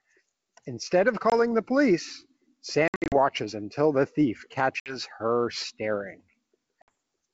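Packet loss on an ADPCM call breaks this speech at 1.30 s (20 ms gone), across 2.88–3.16 s (180 ms scattered, longest run 60 ms), at 4.80–4.98 s and at 6.82–6.89 s (60 ms each). Silence fills each hole, and the decoder's predictor and step size desynchronise, so speech returns slightly distorted before settling.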